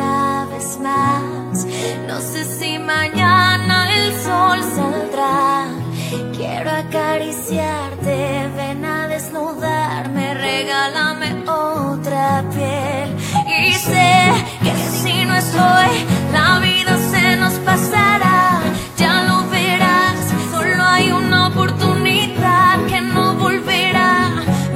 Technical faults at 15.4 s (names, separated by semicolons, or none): digital radio blending to analogue